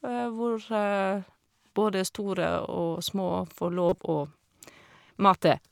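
Speech, with one corrupt frame decoded: from 3.89 to 3.99 s the decoder played a few bit-damaged frames, misplacing energy into a brief glitch peaking near -10 dBFS.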